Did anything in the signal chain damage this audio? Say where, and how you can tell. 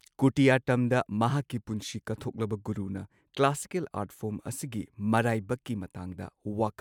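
No, nothing in the signal chain damaged this audio.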